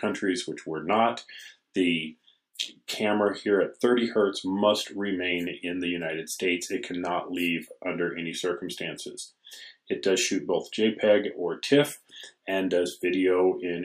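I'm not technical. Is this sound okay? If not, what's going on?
Yes, nothing wrong can be heard anywhere in this recording.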